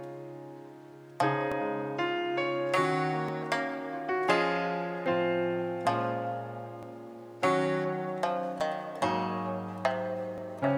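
From 1.52 to 10.38 s there's a regular click every 1.77 s, likely clock drift buffer slips: mismatched clocks periodically forcing a small block of samples to drop or repeat.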